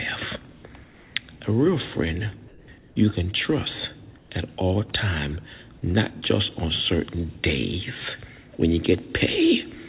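At 0.52 to 0.64 s, 0.84 to 1.16 s, 2.48 to 2.68 s, 2.78 to 2.96 s and 4.18 to 4.30 s, the faint background, about 28 dB below the loud passages, turns into a flat, featureless hiss, between about 1 and 6 dB quieter. This is comfort noise in place of the background, likely because discontinuous transmission halted sending during pauses and the receiver filled them with synthetic noise. Throughout, the band-limited call audio carries nothing above 4 kHz.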